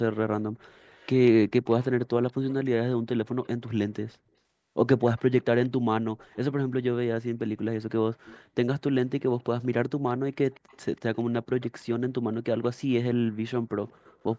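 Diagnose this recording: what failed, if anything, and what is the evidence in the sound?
A faint copy of the speech trails it by 189 ms, about 25 to 30 dB down, at 0.76–2.54, 3.25–4.17, 5.18–6.37, 8.25–8.79, 9.4–11.7 and 13.88–14.38 s. This echo leak points to call processing, likely a loudspeaker-side echo canceller returning uncancelled pickup.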